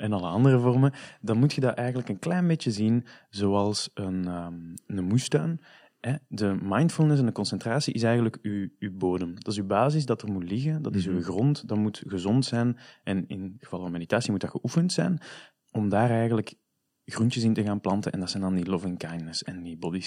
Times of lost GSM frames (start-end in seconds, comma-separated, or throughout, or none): none